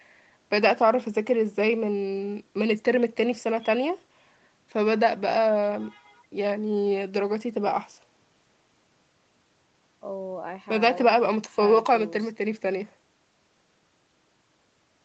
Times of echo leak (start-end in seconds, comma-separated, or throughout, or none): none